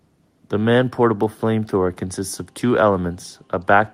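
No technical faults can be heard anywhere in this speech recording. Nothing breaks up, drops out or distorts along the way.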